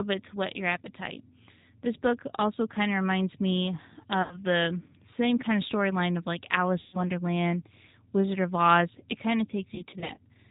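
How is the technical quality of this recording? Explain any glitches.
The recording is speech carried over a low-bitrate phone codec, with three short dropouts concealed by the decoder.

The G.729 codec is audible throughout. It rebuilds the voice at 8 kbit/s from a vocal-tract filter, pitch predictor and sparse pulses, so it sounds rough and slightly synthetic. A spectrogram shows nothing above 4 kHz and smeared harmonics.

VoIP packet loss concealed by the speech codec hits at 4.22 to 4.38 s, after "kind of reminds me" and before "the same kind of", losing about 90 ms. It hits again at 6.81 to 7.01 s, after "of storyline of like", losing about 120 ms. The third is 9.75 to 10.19 s, after "kind of", where about 180 ms is lost in short gaps of at most 30 ms. The decoder fills each gap by extending the last pitch and filter. That produces a buzzy tone or coloured noise that fades, showing as flat, repeated harmonics or noise and a decaying waveform envelope, followed by weak speech while the decoder recovers.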